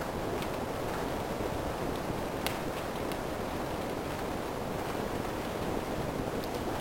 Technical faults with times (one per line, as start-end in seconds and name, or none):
4.43 compressed frames skipped